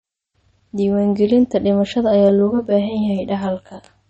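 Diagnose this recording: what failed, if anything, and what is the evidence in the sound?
Codec stage, throughout: nothing above 8.4 kHz and plainly audible watery, swirling artefacts, likely MP3 compression at a low bitrate, which fits about 32 kbps.

Mixing stage, from 2.29 s to the end: channel delay (comb filtering). One channel lags about 20 ms, and the mono sum carves notches roughly every 50 Hz, the first near 30 Hz, so it sounds rough or slightly doubled.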